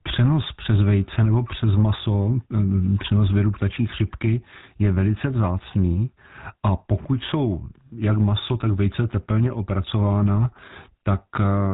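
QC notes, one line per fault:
Throughout: GSM full-rate codec. The speech was coded by a vocal-tract model driven by regularly spaced excitation pulses, keeping only a decimated fraction of the excitation detail, at a rate that fits the 13 kbps full-rate mode. Nothing above 3.8 kHz survives, so sibilants and brightness are gone, and the coarse pulse excitation leaves a plainly audible buzzy, gravelly roughness over the whole voice instead of a smooth tone.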